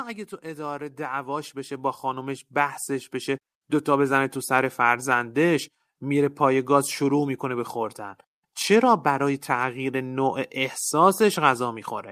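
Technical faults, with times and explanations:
0.42–4.26 s, automatic gain rising. The level climbs steadily by about 14 dB across nearly four seconds. The automatic gain control judged the input too quiet and raised its gain step by step. Because it boosts the whole signal, the background noise swells along with the voice. The rise is slow and smooth, not sudden. That gradual slope is the sign of gain control reacting over time.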